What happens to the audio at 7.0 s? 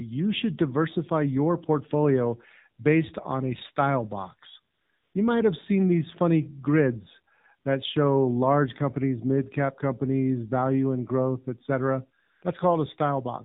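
At 7.0 s the speech carries AMR narrowband mobile codec damage, present throughout: buzzy, synthetic tone consistent with roughly 7.4 kbps, and a spectrogram shows a hard ceiling at 4 kHz.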